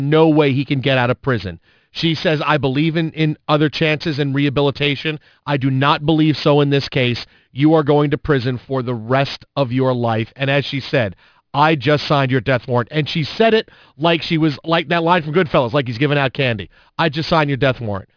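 Speech, resampled throughout without an anti-aliasing filter, which fits a drop to 11 kHz. Content above the 5.5 kHz fold point reflects back down as aliasing, sitting roughly 20 dB below the speech, so sibilants turn gritty and metallic and the spectrum runs hard to the band edge.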